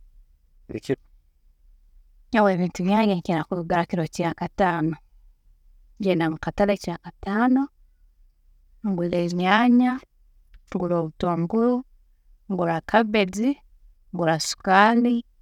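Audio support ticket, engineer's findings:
Listened to the full speech recording and nothing stood out as a problem worth logging against any component.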